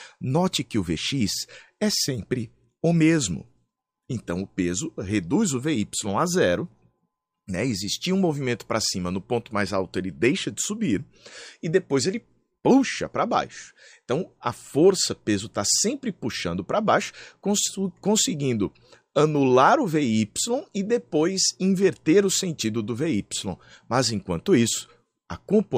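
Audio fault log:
No technical faults can be heard anywhere in the audio.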